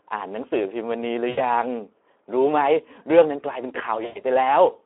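Throughout, the speech carries plainly audible Speex codec damage: a hoarse, noisy texture from the thin excitation coding, consistent with a setting near 11 kbps, inside a 300 to 3400 Hz telephone band that strips the lows and everything above it.

At 1.29 to 1.41 s and again at 4.05 to 4.22 s, VoIP packet loss concealed by the speech codec fills gaps of 80 ms and 100 ms. The decoder stretches its last pitch and filter into a fading buzzy tone or coloured noise, and the voice stays weak briefly afterward.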